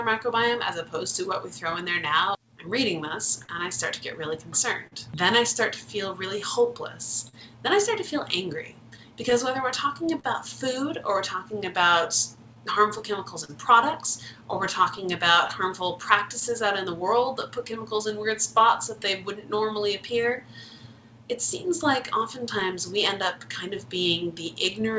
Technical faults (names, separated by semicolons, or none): clock drift between sender and receiver; repeated timing corrections; scattered short gaps